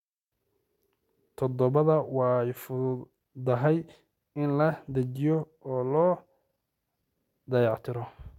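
No technical faults can be heard in this speech recording, so there are none to describe in time order.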